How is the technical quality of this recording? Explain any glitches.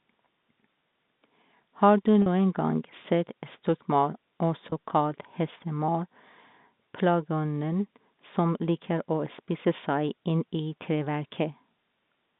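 Two brief dropouts in this telephone-band speech were patched by packet loss concealment with pitch repetition. At 2.22–2.26 s, just before "gang sett stokkmaur", about 40 ms went missing, which fits two 20 ms packets. At 4.70–4.72 s, right after "gang sett stokkmaur", a 20 ms gap suggests a single packet. The receiver filled each hole by looping the last pitch period, so both sound like a faint, buzzy hold on the sound. On a spectrogram, the harmonics run flat and unchanging for those few milliseconds, and the waveform shows identical repeated cycles.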